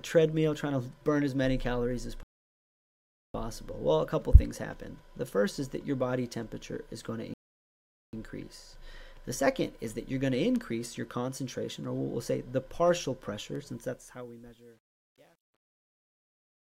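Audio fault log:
2.23–3.34 s and 7.34–8.13 s, rebuffering stall: the player used up its downloaded audio and had to wait for more data, so playback halts twice. The sound drops to silence for 1.11 s and then 0.79 s, and each time it resumes exactly where it stopped. Nothing is skipped; the gaps only add about 1.9 s to the running time.
13.69–16.70 s, truncation distortion on a fade: the gain stage shaping the fade-out discards low-order bits without dither, which fits a resolution of around 11 bits. As the fade nears its end, the waveform collapses onto a few coarse steps. From 14.16 s to the end, the tail of the fade-out turns gritty.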